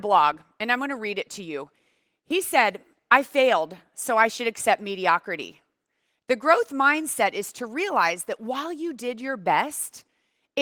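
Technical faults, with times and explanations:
Nothing here counts as a fault: the speech comes through Opus voice compression at 20 kbps in hybrid mode with the full band kept, and the coding leaves only a light trace.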